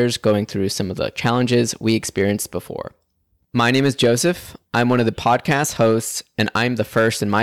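Hard clipping runs through the whole speech clip: the signal was driven about 5 dB past what one stage could pass, so roughly one or two percent of samples were flattened at that stage's limit. Loud syllables carry a brittle crackle, and the waveform shows squared-off peaks, with harmonic smearing reaching high up the spectrogram on each peak.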